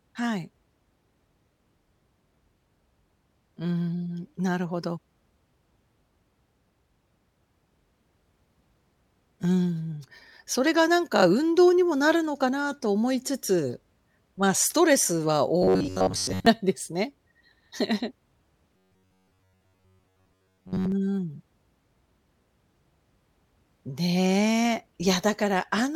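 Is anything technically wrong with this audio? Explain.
Yes. There is robotic sound from repeated short buffers at 15.62 to 16.47 s and 18.77 to 20.92 s. The speech becomes a rigid metallic buzz near 93.8 Hz. The likely cause is a roughly 10.7 ms buffer being replayed while most of the real audio is skipped.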